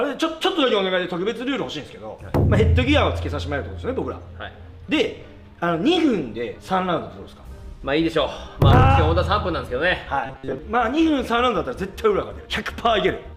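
From 10.26 to 10.59 s, new audio likely arrived too seldom, so playback kept repeating a short buffer and skipped most of the real signal. This robotic sound from repeated short buffers leaves a rigid 133 Hz metallic buzz that only loosely follows the sound.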